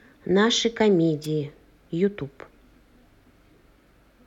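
It's a short speech clip with one wireless microphone noise hit, a quick burst of static from about 1.23 to 1.27 s, only around 40 ms long. The radio link from the analogue FM mic momentarily faded, probably from reflected signals cancelling the direct one at the receiver. As the carrier dropped, the receiver's own hiss jumped up before the signal recovered.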